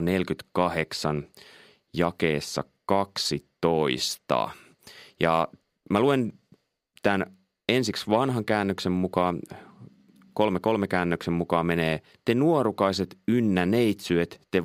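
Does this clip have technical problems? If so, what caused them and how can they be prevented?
No, nothing technical stands out in this one, so there's no cause to track down and nothing to guard against.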